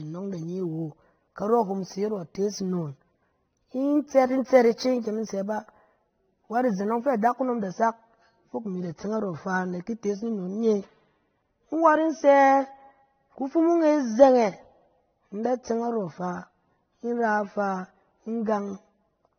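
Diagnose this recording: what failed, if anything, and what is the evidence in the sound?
The codec stage shows two layers of artefacts, likely from transcoding between lossy codecs such as AAC then MP3. Everything above 6.3 kHz is gone, and the mixed artefacts distinguish this from a single encode.

From 0.37 to 7.37 s, just before "da sak fok imi", the converter adds roughness about 40 dB below the signal. This is sample clock jitter of a couple of microseconds. Unlike steady noise, it swells on loud, bright sounds and disappears in pauses.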